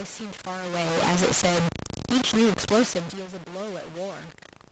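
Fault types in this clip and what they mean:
Low bit depth without dither: The speech is coarse and gritty throughout, with grain that rises and falls with the sound and quiet stretches that sputter or drop out. The likely cause is truncation to a handful of levels, roughly 3 bits, leaving error barely below the speech.
Automatic gain falling: From 0.73 s to 3.03 s the speech sinks gradually by about 4 dB, and the background sinks with it. The automatic gain control judged the input too loud or its background noise too strong and eased its gain down over those 2.3 seconds.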